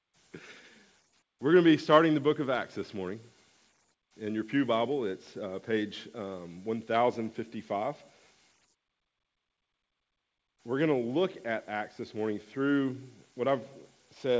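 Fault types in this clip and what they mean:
No faults can be heard anywhere in this clip.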